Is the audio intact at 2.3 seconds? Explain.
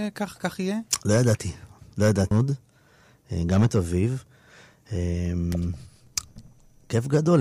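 No. At 2.30 s the speech jumps ahead with a small blip, a stream segment skipped: a chunk likely failed to load, so the player went straight to the next one.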